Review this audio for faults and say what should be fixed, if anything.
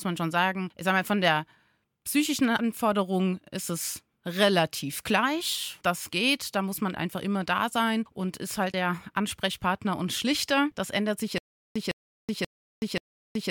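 From 11.38 s, just after "ändert sich", the speech breaks into a stutter with silent gaps that runs to the end: a 157 ms fragment repeats four times, each followed by 375 ms of dead digital silence, giving a steady 532 ms cycle. The likely cause is a stalled player or stream that replayed its last buffered fragment on each retry and then ran dry, so the speech after that point never plays. To prevent it, give playback enough buffering and a reliable feed so it cannot stall.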